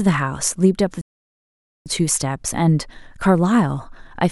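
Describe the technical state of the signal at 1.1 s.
At 1.1 s the output is inside a playback stall running from 1.01 to 1.86 s: the speech halts mid-flow for about 0.84 s of dead silence, likely because the player starved of data. The waveform shows a flat line and the spectrogram a blank gap.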